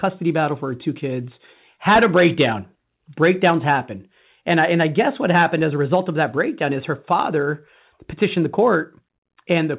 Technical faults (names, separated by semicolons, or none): clock drift between sender and receiver; repeated timing corrections